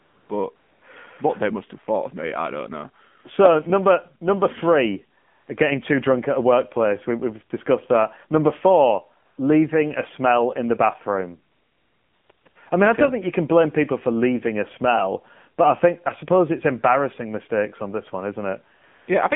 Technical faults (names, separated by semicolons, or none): AMR narrowband mobile codec; AMR comfort noise